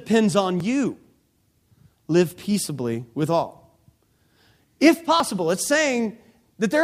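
It's a speech recording with two points where the sound jumps forward, at 0.60 s and again at 5.20 s. Neither has a gap of silence. The audio just snaps ahead, skipping something like 20 ms each time. That pattern points to a dropped buffer (overrun), likely the capture side not reading its samples in time, so the hardware overwrote that chunk and the audio either side got spliced straight together.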